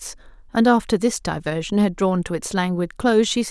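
Nothing stood out as a technical fault on listening to this speech recording.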